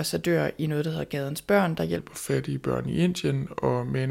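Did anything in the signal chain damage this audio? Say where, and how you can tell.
Yes. From 1.99 s to the end at 4.11 s the speech turns deeper and slower, a section at the wrong speed running at 0.843x, about three semitones flat. Pitch and tempo drop together, which likely points to playback or editing against a mismatched clock.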